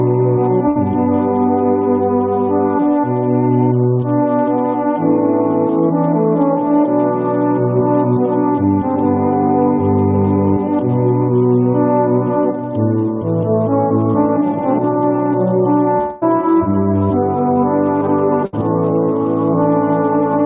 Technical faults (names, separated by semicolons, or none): burst of packet loss; long network dropout